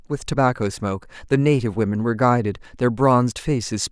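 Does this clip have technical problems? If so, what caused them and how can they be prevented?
No, there are no technical problems in this recording.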